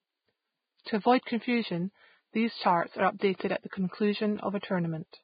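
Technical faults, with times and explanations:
Throughout, Vorbis compression: The sound is hissy and grainy, with nothing above 4.9 kHz. The treble has been quantised so coarsely that its fine detail turns into noise of similar energy. This roughens the tone and blurs consonant edges. The cause is likely heavy low-bitrate Vorbis coding, which fits a bitrate of about 15 kbps. The codec lowers its cut-off and spends few bits on the residue above its smooth spectral floor.
0.84 to 0.86 s and 3.70 to 3.73 s, pre-echo: A brief hiss comes just before each sharp attack, lasting 20 ms and then 27 ms. The second follows "at the". Each attack falls late in a transform block. The quantisation noise sized for the loud onset spreads across the whole block, including the quiet gap ahead of it. The hiss therefore leads the attack, which sounds softened and smeared rather than crisp.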